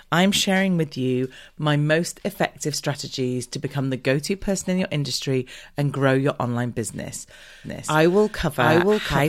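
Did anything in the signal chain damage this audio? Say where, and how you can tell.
Yes. From 7.64 s, just after "grow your online business", a doubled audio track appears and runs to the end. A second full-band copy trails by roughly 0.7 s at about equal level, starting abruptly with no room decay. This likely comes from a slower second capture path.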